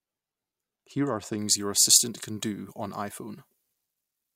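From 1.38 s to the end, pre-emphasis is left on: a 75 µs FM treble boost without its matching de-emphasis lifts 10 kHz about 13 dB, making the speech thin, bright and sibilant.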